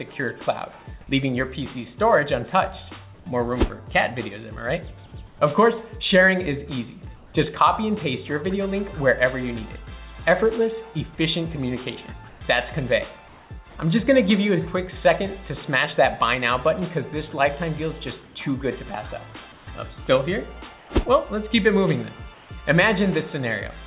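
In eight short pauses the real background gives way to a flat, featureless hiss: at 3.14, 5.27, 7.16, 12.29, 13.28, 18.26, 19.52 and 20.78 s, each lasting 90 to 210 ms. The substitute usually sits about 1 to 8 dB below the surrounding background and once about 2 dB above it, at 18.26 s. This is likely comfort noise in place of the background, where discontinuous transmission halts sending in quiet stretches and the receiver synthesises shaped noise. Nothing is heard above 4 kHz, which fits a G.711 mu-law call path.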